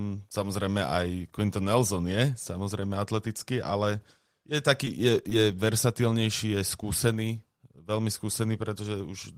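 Between 4.83 and 5.52 s the speech picks up a few brief ticks and tiny smears, about three small hiccups in all. These are scattered short gaps: lost or late packets, the longest around 10 ms, each patched by extending the preceding sound.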